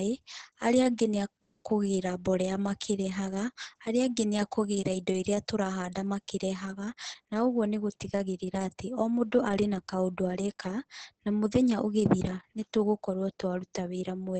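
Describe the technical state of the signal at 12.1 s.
At 12.1 s the speech sounds muffled, hoarse and slightly robotic, with nothing above about 8.6 kHz: heavy Opus voice compression throughout, its coarse SILK coding fitting roughly 10 kbps.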